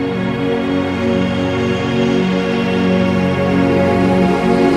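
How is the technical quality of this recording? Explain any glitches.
No technical glitches are audible.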